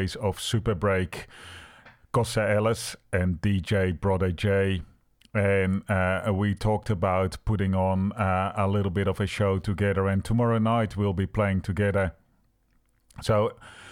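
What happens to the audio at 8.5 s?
Nothing goes wrong at 8.5 s: the speech runs on intact through that moment, with no fault to be heard.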